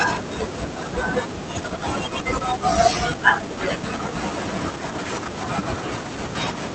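Speech, carried over an Opus call path whose high end stops around 8 kHz, suffers a skip ahead at 1.57 to 1.59 s: a run of audio was dropped while later packets were already queued, so about a second and a half of speech is gone and the two sides are butted together with no fill. From 1.61 to 5.19 s the buffer, now holding more than its target, ran a jitter buffer speed-up, repeatedly cutting pitch-period slices (roughly 0.7 s in total) so the speech plays at 118% speed with unchanged pitch and sounds hurried.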